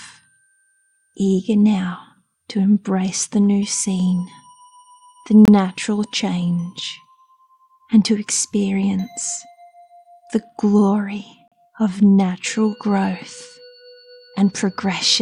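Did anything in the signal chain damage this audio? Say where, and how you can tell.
Yes. Two brief, hard-edged drops to silence occur at playback, at 5.45 to 5.48 s (25 ms) and 11.48 to 11.52 s (38 ms). This is a gap between stream segments: timestamps leave a hole that the player fills with silence. The six-second spacing suggests 6-second segments.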